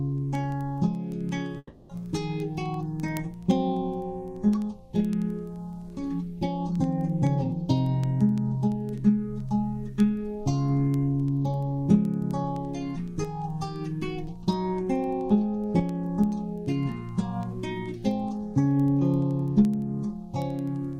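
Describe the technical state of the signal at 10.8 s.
At 10.8 s the signal is inside a stretch of word clock ticks that runs from 0.18 s to the end of the clip. The receiving device is running on its own clock rather than locked to the sender's, with a mismatch on the order of a couple of hundred parts per million. Each time the two clocks slip past each other, a single sample is dropped or repeated. This produces ticks roughly every tenth of a second, about ten per second, over the sound.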